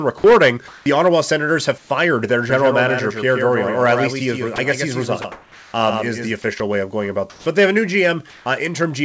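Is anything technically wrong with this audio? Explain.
Yes, this speech has three kinds of fault.

Comfort noise in place of the background appears at 0.68–0.86, 1.78–1.90, 5.32–5.74, 7.30–7.46 and 8.30–8.46 s. This is likely discontinuous transmission with synthetic fill, heard as a flat, featureless hiss. It is at a similar level in three gaps, and about 5 dB and 8 dB quieter in the other two.

A doubled audio track runs from 2.50 to 6.32 s. A second copy arrives about a tenth of a second late and about 5 dB quieter, giving a dry, slapback-like echo.

Sound dropped by the voice detector occurs at 4.56, 5.22 and 6.58 s. Each time, brief fragments are likely judged as background and replaced with noise, so the sound momentarily vanishes.

The call path runs through a codec with nothing audible above 8 kHz, which fits wideband G.722.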